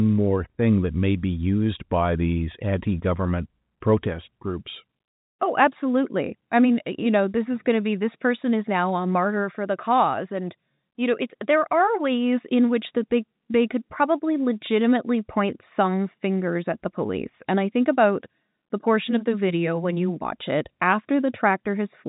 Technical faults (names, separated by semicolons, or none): none